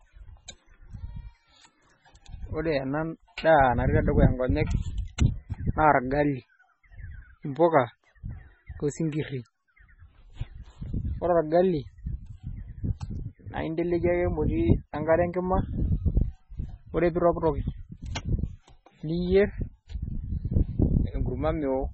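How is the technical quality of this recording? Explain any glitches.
Pretty rough, honestly. All the way through, the speech sounds watery and swirly, with nothing above 8 kHz. That's likely MP3 compression at a very low bitrate, around 16 kbps. Starved of bits, the encoder chops off the treble and lets weak frequency detail flicker in and out between frames, so consonants smear and sibilants go metallic.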